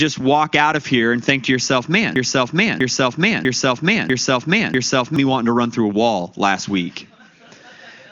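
After "and think to yourself", 2.16 to 5.16 s is a broken-record loop: one identical 0.65 s fragment plays five times back to back, likely from a stalled stream. Unlike a dropout, it never goes silent, and speech resumes at "me wanting to run".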